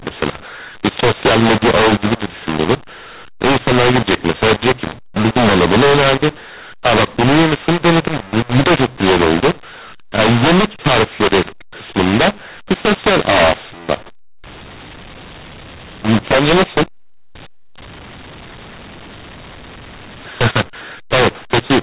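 From start to finish the speech sounds harsh and gritty, with loud passages distorted and level jumps that don't follow the talker, and the pauses never fall silent but hiss with a lifted noise floor. This is mu-law and A-law mixed up: the telephone audio was coded with mu-law but decoded as A-law, so each 8-bit code maps to the wrong level, scrambling loudness and pushing the quietest samples well above silence, all within the 4 kHz telephone band.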